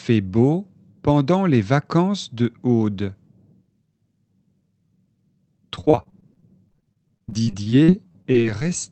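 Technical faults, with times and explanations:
5.75–8.71 s, repeated packet loss (robotic sound): around thirty short dropouts, up to 44 ms each, get patched by stretching the last sound, so it turns choppy with pieces missing.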